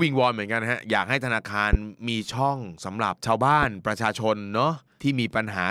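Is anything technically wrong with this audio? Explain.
Yes, there's a loud pop twice in this speech, at 1.73–1.77 s and again at 3.63–3.66 s. Each is a single sharp hit peaking roughly 15 dB above the speech, and the talking carries on right underneath it. The likely cause is a sudden voltage spike, from a plug, switch, static discharge or driver glitch, landing on the signal, with the downstream circuitry rounding it off into that brief thump.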